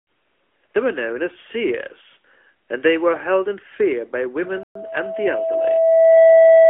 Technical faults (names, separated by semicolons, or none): AMR narrowband mobile codec; loudspeaker feedback squeal; playback stall